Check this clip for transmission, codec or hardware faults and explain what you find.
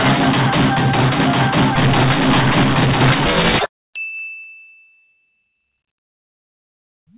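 Nothing here points to a transmission, codec or hardware fault; the sound simply carries the narrow, phone-like band of a call, with nothing above 4 kHz, which fits an ordinary G.711 mu-law link doing its normal job.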